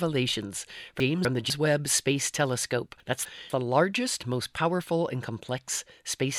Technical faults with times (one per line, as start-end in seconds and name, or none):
1.00-1.50 chunks out of order
3.00-3.50 chunks out of order